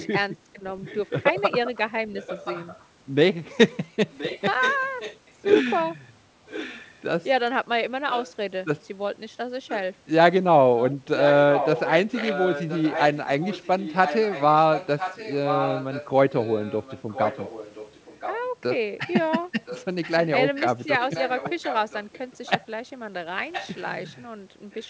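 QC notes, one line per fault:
Throughout, echo leak: a second copy of the speech trails the original by 1.02 s at about 10 dB lower, likely an echo canceller failing to remove loudspeaker pickup.
0.55–0.63 s, speech suppressed in double talk: the speech dips by about 10 dB for roughly 70 ms, likely the echo canceller mistaking overlapping talk for echo and attenuating both.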